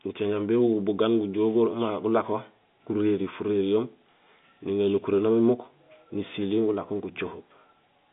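Nothing stood out on listening to this speech clip; no technical fault could be heard at any point.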